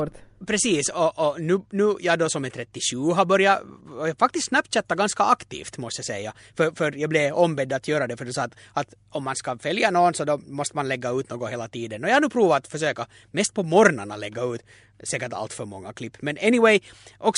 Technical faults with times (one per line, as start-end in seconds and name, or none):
none